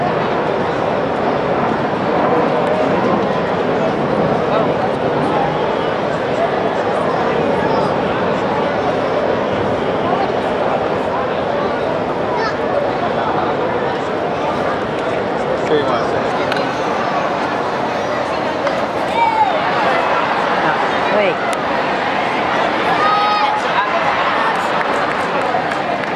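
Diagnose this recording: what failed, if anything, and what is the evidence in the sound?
A section at the wrong speed runs from 16.3 s to the end. The sound plays 1.17 times fast and rises about three semitones, with tempo and pitch jumping together. That coupling rules out a pitch shifter, and the likely cause is a mismatched playback or editing clock.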